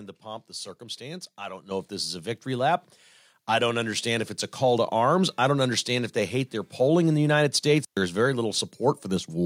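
At 1.71 s the microphone volume steps up by about 7 dB in one jump. Voice and background get louder together, as the input gain was raised. At 7.83 s an intermittent contact opens for about 120 ms. The sound drops out, with crackle at each edge, like a loose plug briefly breaking the connection.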